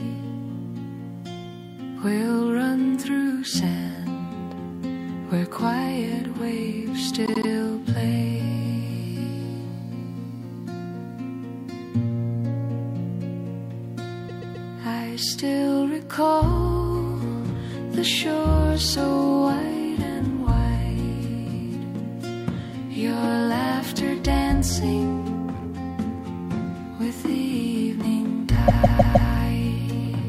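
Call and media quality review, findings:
Repeated frames: stutters at 7.25–7.49 s, 14.28–14.67 s and 28.67–29.30 s. Blocks of about 78, 131 and 157 ms replay 3, 3 and 4 extra times. Probably the encoder output or transport resending compressed frames, which adds about 0.24, 0.39 and 0.63 s.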